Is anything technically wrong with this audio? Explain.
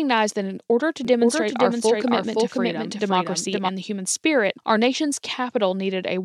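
Yes, there are three faults. From 1.05 to 3.69 s there is a doubled audio track, likely from a second capture path. A full-band copy at roughly equal level trails about half a second behind, heard as an abrupt, dry echo of the speech. At 1.81 s and again from 5.25 to 5.34 s, a corrupt frame was decoded: damaged compressed frames, a couple and then a few, were played with misread gains and codes. The result is short chirps and bursts of noise at the wrong frequencies, peaking around -20 and then -15 dBFS.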